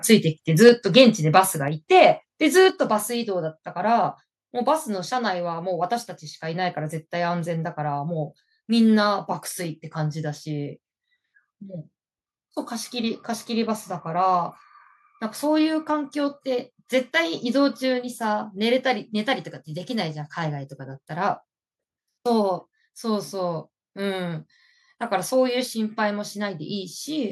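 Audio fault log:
0.66–0.69 s, microphone overload: the input level was likely set too high, driving the peaks about 3 dB past the converter's ceiling. Roughly a tenth of the samples are flattened at the converter's limit, so this peak carries a harsh, crackly edge where its tops are sheared off.
0.69 s, microphone volume stepped down: the input gain drops about 4 dB in a single step right after that clipped peak, so the speech and the background both become suddenly quieter, with no fade between the two levels.
0.99–1.02 s, microphone overload: the level again overshoots the converter limit, this time by about 2 dB. Only a few percent of samples are cut flat, so the added crackle is milder than in the first overload.
2.70 s, microphone volume stepped down: the gain falls by a further 5 dB in one abrupt step, and the speech and the background level both drop together.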